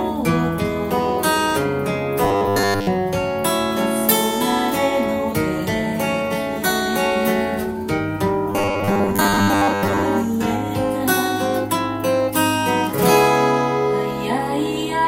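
From 2.24 s to 2.87 s, and again from 8.52 s to 10.05 s, the sound collapses into robotic sound from repeated short buffers: a rigid, metallic buzz locked at 100 Hz that only loosely tracks the underlying audio. The likely cause is a playback path starved of new data, looping the same short fragment, which fits a 10 ms buffer, and discarding most of the real signal in those spans.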